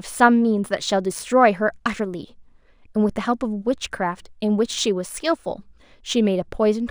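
Crude rate conversion runs throughout the speech, consistent with a 32 kHz to 44.1 kHz change made by linear interpolation without filtering. The resulting error, roughly 30 dB below the signal, forms inharmonic tones heard as a gritty fizz tracking loud, bright passages.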